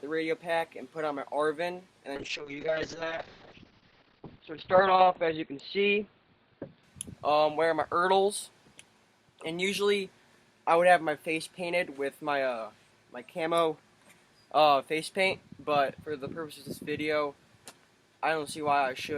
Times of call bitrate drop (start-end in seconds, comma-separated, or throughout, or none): 2.16-8.39